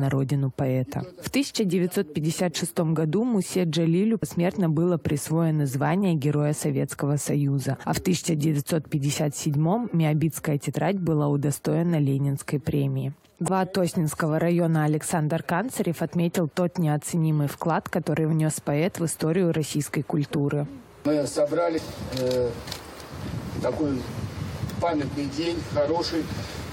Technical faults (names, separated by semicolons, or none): compressed frames skipped